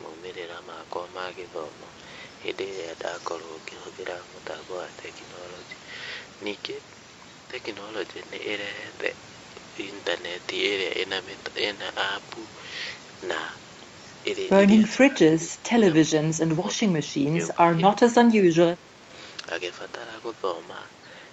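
Speech suppressed in double talk, from 14.82 to 15.83 s, 16.05 to 16.24 s, 16.49 to 16.85 s, 17.27 to 17.37 s, 17.54 to 17.59 s and 17.76 to 19.07 s: the voice dips by up to about 15 dB and breaks into pieces, likely because the echo canceller mistook it for loudspeaker echo while both sides spoke.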